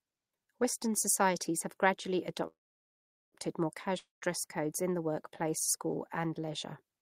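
At 2.47 s, right after "societies have gradually", a call audio freeze begins: the last sound smears into a brief fading buzz, then roughly 0.78 s of silence until 3.35 s, likely a jitter buffer running dry. The speech resumes exactly where it stopped, so nothing is lost; it just arrives about 0.85 s late.

From 3.98 to 4.24 s, just before "codes in the workplace", a long network dropout behaves differently. After a short fading tail and about 0.16 s of silence, the audio returns with roughly 0.24 s missing, likely from packets lost in transit rather than held up.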